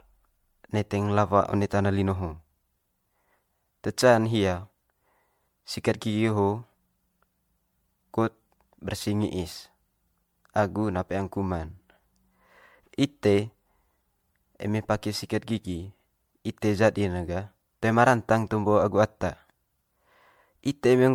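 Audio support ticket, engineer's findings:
Generation loss, whole clip: swirly, hollow, smeared speech, blurred attacks; likely repeated MP3 re-encoding, around seven passes, each requantising on a shifted frame grid, fitting roughly 96 kbit/s.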